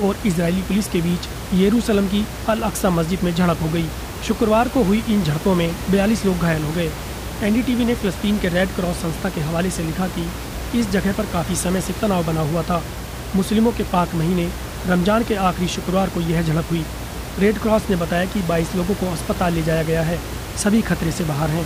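From the first second to the end, a mains hum runs under the speech. It is a steady low tone at 60 Hz, only about 15 dB below the speech. Power-line current is leaking into the signal, through a ground loop or a nearby transformer.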